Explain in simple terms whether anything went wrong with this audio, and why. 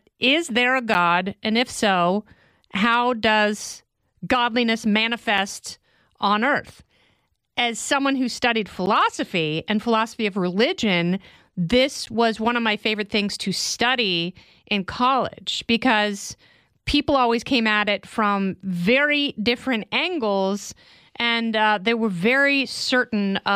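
The speech drops out briefly four times, at 0.94, 5.38, 8.86 and 12.06 seconds. Each one is a block of digital silence lasting about 3 to 14 ms. The sound snaps to nothing and straight back, so each gap is heard as a small tick.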